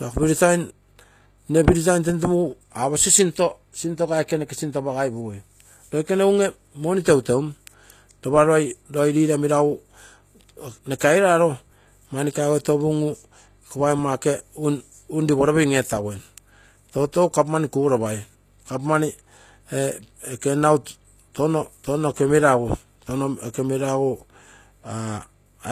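Throughout the speech, the treble has a synthetic quality. The damage is plainly audible. The likely cause is HE-AAC compression at a low bitrate, consistent with about 24 kbps. The codec keeps only the lower spectrum and rebuilds the top by copying lower bands upward. That rebuilt treble is bright but not genuine. Its harmonics fail to line up with the real ones below. S sounds turn gritty and lispy. Nothing is present above 14.9 kHz.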